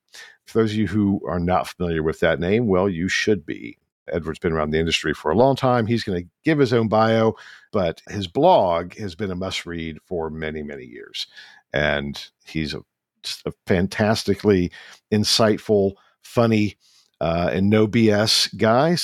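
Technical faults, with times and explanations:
No technical faults are audible.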